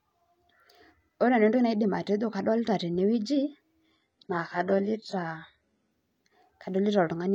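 A speech clip with an adaptive stream dropping to a lower bitrate. From 3.91 s to 5.91 s the quality changes abruptly, with no gap. Codec artefacts rise. Nothing in the clip reaches above 14.4 kHz. The sound points to a switch from a full-rate AAC stream to a very low-rate HE-AAC version, near 12 kbit/s. The connection slowed, so the player fetched cheaper segments for two seconds.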